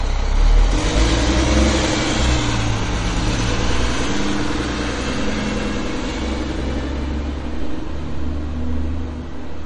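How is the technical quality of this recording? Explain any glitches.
The technical quality is poor, with plainly audible coding damage across the whole recording, most likely from MP3 compression. Nothing reaches above 10.5 kHz, a fixed treble cut the encoder makes when short of bits, and the damage points to a low bitrate of around 37 kbps. Weak frequency components switch on and off between frames, giving a watery, swirling texture, metallic chirps on bright sounds, and smeared attacks. A simple low-pass filter would remove the same treble but leave the remaining sound steady, without that shimmer.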